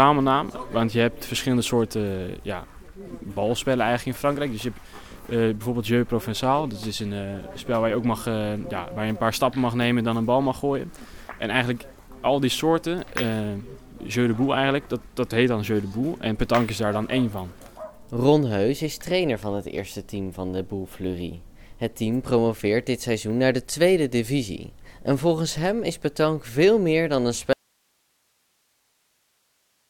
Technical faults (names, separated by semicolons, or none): audio dropout to a faint residue